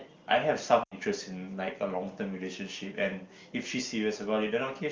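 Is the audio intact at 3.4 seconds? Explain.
Yes, the speech at 3.4 s is intact, with no dropout, click or distortion at that moment.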